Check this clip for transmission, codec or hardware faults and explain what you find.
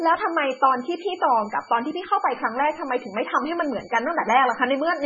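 Two faults run through the whole clip: a supply whistle and heavy codec damage.

Switching supply whistle, throughout: a power supply running in an audible burst mode or beating with another supply leaks a high whistle into the speech, wandering between about 2.26 and 2.31 kHz as its load shifts. It sits roughly 30 dB below the speech.

MP3 compression, throughout: nothing is left above 6.9 kHz, and the speech sounds watery and swirly, with smeared attacks and chirpy s sounds. This is likely a starved MP3 encoder that cut the treble and switched weak frequency lines on and off between frames, which fits a very low bitrate around 16 kbps.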